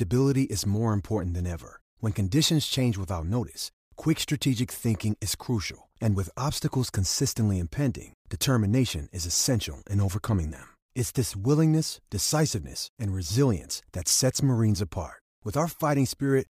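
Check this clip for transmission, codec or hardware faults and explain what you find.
No transmission, codec or hardware faults turned up in this clip.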